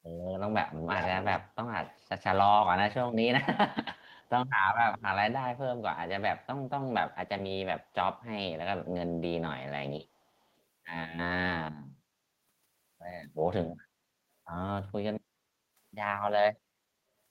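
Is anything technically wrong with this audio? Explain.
Yes, there are two faults. Echo leak appears from 0.92 to 1.39 s, 1.85 to 2.09 s, 3.96 to 4.29 s and 4.98 to 5.02 s. A copy of the speech returns 392 ms late. The first burst is nearly as loud as the speech, and the later ones are much fainter. The likely cause is a far-end echo canceller letting loudspeaker sound back into its microphone. On a spectrogram, each burst repeats the speech's harmonic pattern shifted right by 392 ms.

Background gated by the echo canceller occurs from 15.23 to 15.73 s. The room sound dips by about 9 dB for roughly half a second, because the canceller pulled the microphone down while the loudspeaker played. The waveform shows the noise floor stepping down, and the spectrogram shows a faint, full-band band of lighter noise.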